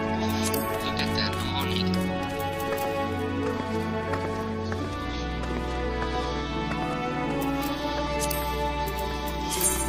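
At 8.06 s, compressed frames are skipped. The sound jumps forward by roughly 150 ms, which fits about seven frames of 23.2 ms each going missing or being rejected by the decoder.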